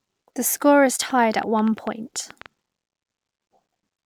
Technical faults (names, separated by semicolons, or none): train of clicks